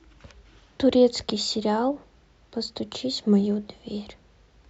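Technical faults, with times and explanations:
Nothing in this speech recording stands out as a technical fault, so there's nothing here to flag.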